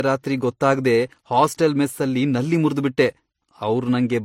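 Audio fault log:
Throughout, transcoding between lossy codecs: the speech was likely encoded twice, with a low-rate HE-AAC stage followed by MP3 near 59 kbit/s. The MP3 wastes bits re-coding the earlier smearing and adds its own swirl, so both textures coexist, with nothing above 16.3 kHz.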